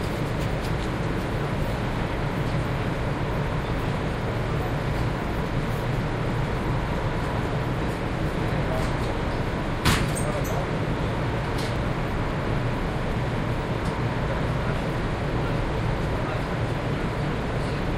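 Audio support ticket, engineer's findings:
Tiny skip at 11.76 s, waveform jumps. Overlap between stream segments: segment timestamps overlap at a boundary (segments about 6 s long), player trims the overlap from audio that wasn't duplicated, so a few milliseconds drop out.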